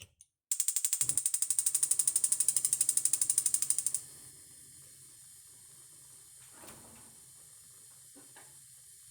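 From 1.59 s to 4.31 s everything is heard twice: a second, equally loud, full-band copy trails the original by about a fifth of a second, dry and with no room colour, and it switches in and out abruptly. This doubled audio track is likely an edit or second capture path holding two copies out of step.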